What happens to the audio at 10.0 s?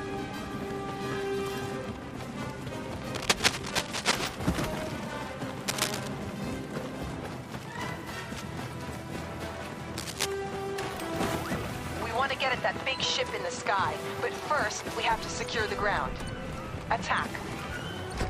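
A burst of cable scratch noise runs from 9.98 to 10.26 s, a bit under a third of a second of dense, ragged scratching laid over the sound at roughly the same loudness as the sound itself. The likely cause is a worn cable, connector or control being moved, its contact resistance fluctuating rapidly. Unlike a single digital click or dropout, this is a continuous, uneven rustle of many overlapping crackles.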